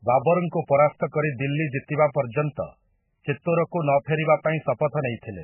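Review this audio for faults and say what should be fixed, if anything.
MP3 compression, heavy and present throughout the speech. Nothing reaches above 3 kHz, so the treble is simply gone and s sounds lose their hiss, which fits a very low bitrate around 8 kbps. At that rate the encoder has almost no bits to spread across its frequency lines, so weaker components drop in and out from one frame to the next, giving a watery, swirling texture with chirpy edges and blurred onsets. The likely cause is an encoder starved of bits. To prevent this, encode at 64 kbps or higher, or keep a lossless master and compress only once at the end.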